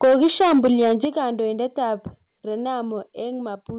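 From 0.03 s to 1.05 s the speech shows microphone overload. The peaks sit about 7 dB beyond the converter's ceiling and have their tops sheared flat, with roughly a tenth of samples affected. That gives the loudest syllables a harsh, crackling edge. The likely cause is an input volume set too high for the source. The bandwidth stops at 4 kHz, which fits a G.711 A-law call path at 64 kbps, so the distortion products sit within a narrowband image.

The microphone volume is stepped down in four separate jumps. The first is about 2 dB at 0.04 s. The largest is about 7 dB at 1.05 s, and it coincides with the end of the overloaded stretch. Two more follow, about 3 dB at 2.07 s and about 2 dB at 3.09 s. Each is an abrupt level drop in voice and background together, spaced roughly a second apart. This is likely the call software reacting to the clipping by cutting the device's input gain in discrete steps.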